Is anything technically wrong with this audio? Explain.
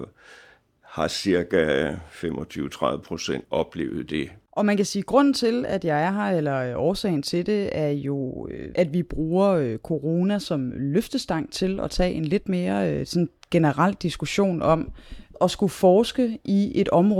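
No, nothing technically wrong turns up anywhere in this speech recording, so there's nothing here to flag.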